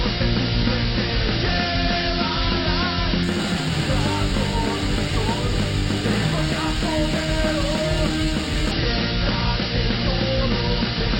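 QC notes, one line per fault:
3.23–8.71 s, imaging from linear upsampling: a dulled top carries a faint metallic shimmer. Mirror images about 20 dB down at 6–12 kHz fit straight-line interpolation from 12 kHz to 48 kHz. Unlike aliasing, they mirror the content rather than folding it back.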